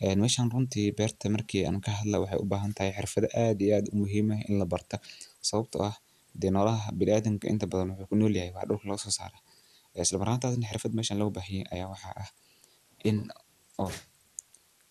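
Low bit depth with dither runs through the whole clip, from start to finish. The speech has been stored with very few amplitude steps, which fits a depth of about 9 bits, and a small random signal was mixed in before each sample was rounded. That randomness turns the rounding error into steady white noise instead of distortion, so the speech sits over a constant, even hiss roughly 35 dB below it, present in pauses and behind every phrase.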